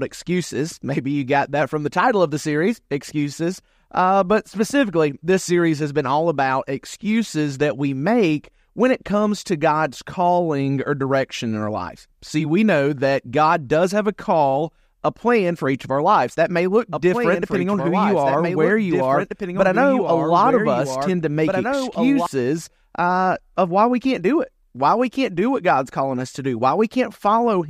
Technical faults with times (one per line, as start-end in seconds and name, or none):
16.92-22.26 doubled audio track